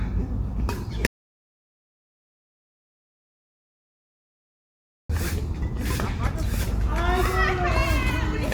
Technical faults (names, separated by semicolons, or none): audio dropout to silence